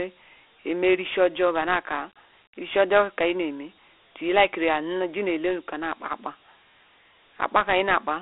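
From start to finish the speech sounds thin and boxed-in, confined to a phone-like band of roughly 300 Hz to 3.5 kHz with nothing above 3.8 kHz, and a gritty, granular hiss rides on every syllable. This is Dialogic VOX ADPCM damage, clearly audible. The coder stores each sample as a coarse 4-bit step from a prediction, which fits a 32 kbps stream at 8 kHz sampling. Its quantisation error tracks the speech as that hiss.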